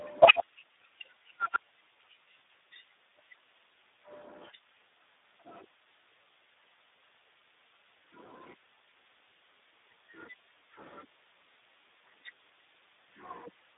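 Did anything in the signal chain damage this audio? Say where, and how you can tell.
Yes, at the codec stage. The whole clip carries Speex codec damage, and it is heavy. The speech sounds hoarse, noisy and edging toward robotic from start to finish. The band runs from about 250 Hz to 3.7 kHz, with nothing above 3.8 kHz. That points to a narrowband telephone-style path. Speex is a CELP codec. At a low setting it has too few bits to model the excitation well. The roughness fits a bitrate near 8 kbps.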